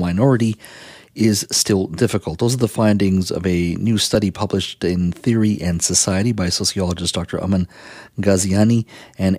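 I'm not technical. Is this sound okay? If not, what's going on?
No. There is a dropped buffer (overrun) at 4.15 s, between "findings of a new" and "published in": a brief jump where the sound skips ahead. The likely cause is the recording software falling behind, so a sliver of a few thousandths of a second was overwritten and lost.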